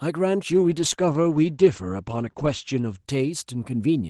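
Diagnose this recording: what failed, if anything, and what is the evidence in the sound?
From 0.53 s to the end, the speech turns rough and watery and loses its top end, with the cut-off dropping from 12 kHz to 8 kHz. This is a call bitrate drop: the bandwidth estimate fell, and the Opus encoder coded more coarsely, consistent with roughly 32 falling to 12 kbps.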